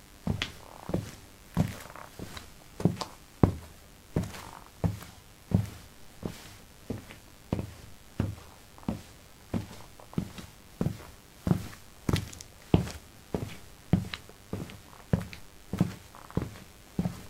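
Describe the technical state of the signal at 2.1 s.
At 2.1 s, mains buzz is present, as it is throughout: switching spikes from the 50 Hz supply, arriving twice per cycle, are getting into the signal path. Their harmonics stack into a steady, raspy buzz sitting roughly 25 dB below the sounds.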